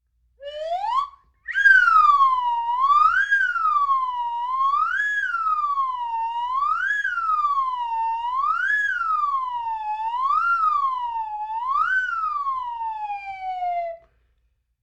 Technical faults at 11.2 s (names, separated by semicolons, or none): none